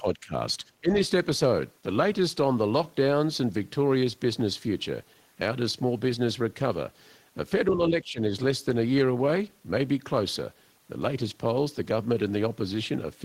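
The speech dips at 0.0 to 0.33 s by around 15 dB, again at 0.58 to 0.65 s by a few decibels, at 0.81 to 0.91 s by around 15 dB, and at 7.72 to 8.2 s by around 10 dB. This is speech suppressed in double talk, likely an echo canceller turning down the near talker while the far side spoke.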